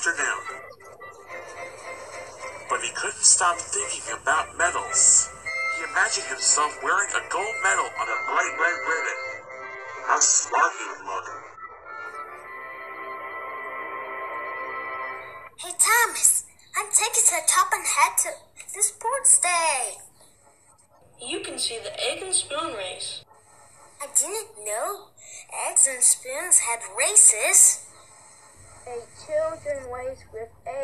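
From 8.06 to 12.06 s, the adaptive stream drops to a lower bitrate. Treble vanishes above 8 kHz, suggesting a very low-rate HE-AAC fallback.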